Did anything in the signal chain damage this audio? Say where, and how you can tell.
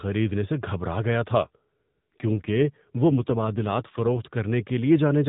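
Yes. Speech turns rougher and more synthetic from 1.38 to 4.27 s with no gap: an AMR rate drop, where the network lowers the codec's bitrate, consistent with 5.9 kbps.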